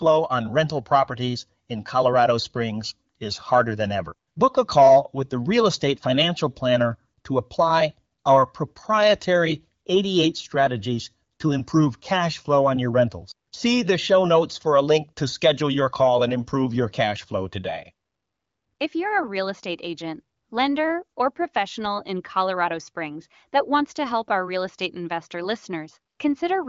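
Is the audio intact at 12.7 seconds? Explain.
Yes, the audio is intact at 12.7 seconds, with no fault at that moment.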